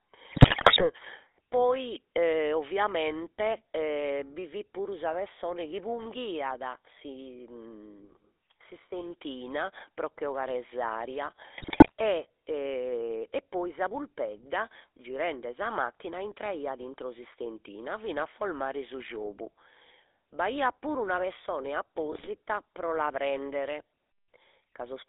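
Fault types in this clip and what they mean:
GSM full-rate codec: 13 kbps vocal-tract coder with pulse excitation; speech sounds buzzy and gravelly, spectrogram shows energy confined to roughly 300 Hz–3.6 kHz throughout.
GSM bit errors: corrupted decoder parameters garble short frames into squawks and pops, at 0.32–0.83 s, after "pro che 'ogare s'aria" at 11.58 s, and before "pro la" at 22.12 s; waveform shows sudden level spikes, spectrogram smeared bursts.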